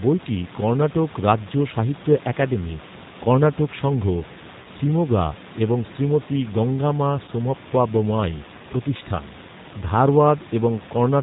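From start to finish the speech carries plainly audible G.729 codec damage, consistent with an 8 kbit/s G.729A link. The decoder rebuilds each 10 ms frame from a vocal tract filter, a pitch predictor and a few pulses, so nothing above 4 kHz survives and the voice sounds rough and slightly synthetic. The room noise, about 17 dB below the speech, warbles under it.

VoIP packet loss concealed by the speech codec occurs twice: from 4.62 to 4.67 s, after "সাহিত্য একাডেমী কর্ণাটক সংঘ", and from 7.26 to 7.30 s, after "শিমোগা এবং শ্রীমতি গঙ্গামা". Each gap fits a single lost 20 ms packet. The decoder extended the last pitch and filter at falling gain, producing a brief buzzy or noisy, fading smear, and the voice stays weakened for a short stretch after real audio resumes.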